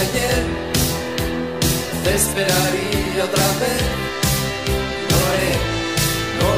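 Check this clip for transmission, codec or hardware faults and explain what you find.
Nothing stood out as a problem on listening.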